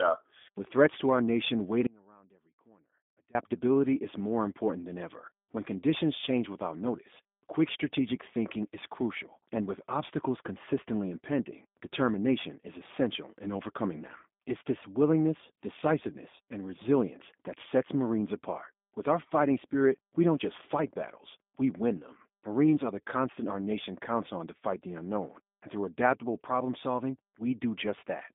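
Speech, carried through a G.729 codec throughout. The band runs from 200 Hz to 3.6 kHz, and nothing reaches above 3.7 kHz. The sound is audibly rough and synthetic, which fits an 8 kbit/s stream. There is an audio dropout to a faint residue from 1.87 to 3.35 s, right after "threats to our nation". For 1.48 s only a faint trace remains, around 30 dB below the speech. The likely cause is the signal being lost upstream while the path after the break stayed live.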